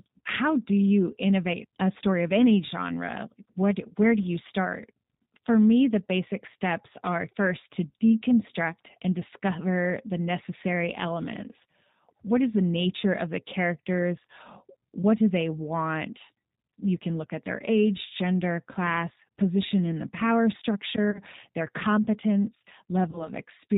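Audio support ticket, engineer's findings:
G.729 codec running the whole call at 8 kbit/s, plainly audible. Speech band-limited, nothing above 4 kHz, slightly rough and synthetic texture from the filter-plus-pulse rebuild. Sounds like a G.729A leg somewhere in the path.

VoIP packet loss concealed by the speech codec at 21.11 to 21.21 s and 23.11 to 23.29 s. Roughly 30 ms and 20 ms gone, respectively. Decoder stretches the last pitch and filter into a fading fill, then weak, smeared recovery afterwards. Likely network-side loss.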